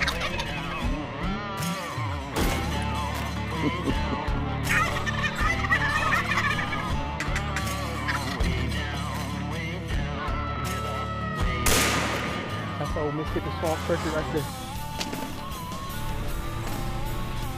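The audio has three short jumbled moments: 4.88 to 4.96 s, 10.56 to 10.64 s, and 16.68 to 16.76 s. These are chunks out of order. In each one, a 40 ms chunk arrived one chunk late and plays after its neighbour, so two chunks swap places and leave three hard joins. Unlike a dropout, no sound goes missing, and unlike a stutter, nothing repeats. The audio is only reordered.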